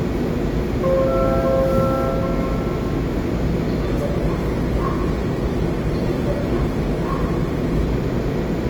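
A recording of everyday sound, about 9 s long, with one quality fault: an adaptive stream at a lower bitrate from 3.86 s to 7.86 s. For those four seconds there are more codec artefacts, then the original quality returns abruptly. Neither switch leaves a gap. The cause is the player stepping down to a lower-quality rendition while the connection slowed. The sound fits a move from an Opus stream at around 64 kbit/s to one near 16 kbit/s.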